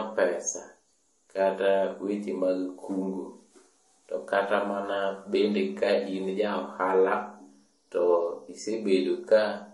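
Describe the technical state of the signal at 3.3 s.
At 3.3 s the speech carries layered compression smear and nothing above 11.3 kHz, as it does throughout, likely transcoding between lossy codecs, an MP3 re-encoded to Vorbis.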